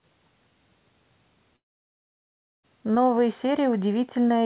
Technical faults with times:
1.56-2.65 long network dropout

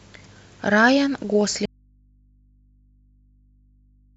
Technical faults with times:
1.66-4.17 audio dropout to a faint residue

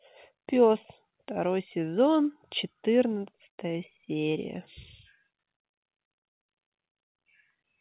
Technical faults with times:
none

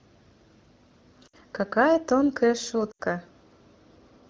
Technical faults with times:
1.28-1.36 lost AMR speech frames
2.91-3.01 lost AMR speech frames

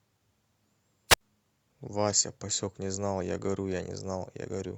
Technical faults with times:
1.08-1.21 wireless microphone squelch dropout

